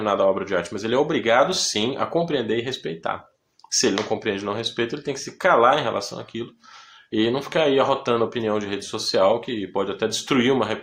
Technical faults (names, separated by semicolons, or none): none